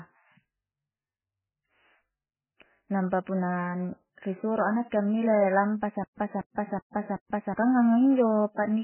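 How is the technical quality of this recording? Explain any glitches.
The technical quality is poor, with heavy compression damage throughout and a stutter near the end.

Across the whole clip the speech sounds muffled and watery, with nothing above 3 kHz and swirling, smeared consonants. This is likely MP3 compression at a very low bitrate: the encoder cut the treble and dropped weak frequency lines that flicker frame to frame.

From 6.04 to 7.54 s there is a stutter with silent gaps. A 237 ms burst repeats four times, each followed by about 139 ms of dead silence, every 376 ms. A stalled player likely replayed its last fragment before running empty, and the audio from that stretch is lost.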